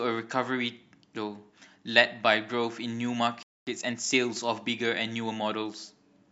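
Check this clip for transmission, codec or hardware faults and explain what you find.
Two playback faults, one following the other, affect the speech around the middle of the clip.

Playback stall, 3.43 to 3.67 s: the player most likely ran short of buffered data, or its output thread was held up, so nothing was sent to the output for 240 ms. The speech stops abruptly partway through and the gap is plainly audible as dead silence before the sound resumes from the point where it broke off.

Time-compressed catch-up, 3.67 to 4.15 s: to recover the delay built up during the stall, the player trims its backlog by removing short segments and cross-fading across the joins, running the material at 1.5 times its normal rate. The speech in that half-second sounds rushed while keeping its normal pitch, before settling back to normal pace.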